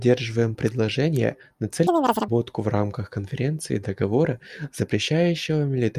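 From 1.87 to 2.28 s the speech jumps to double speed: the audio is read two samples at a time, so the reader treats each pair of samples as a single frame, as if the stream had two channels or samples twice as wide. Each frame consumes twice the data, so playback runs at 2.0x and the pitch rises an octave until normal reading resumes.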